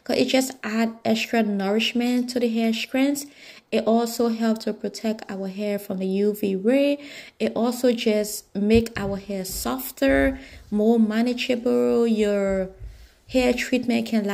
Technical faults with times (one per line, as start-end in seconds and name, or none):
none